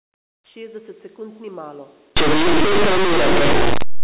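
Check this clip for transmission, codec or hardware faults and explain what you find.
There's one clear decoding fault. From about 2.17 s, right after "sekund ni malo", to the end, you get linear audio read as companded. Plain 8-bit samples are being expanded as mu-law codes, so small values just to one side of zero jump to the largest outputs. The speech turns into loud, harsh, crunchy distortion.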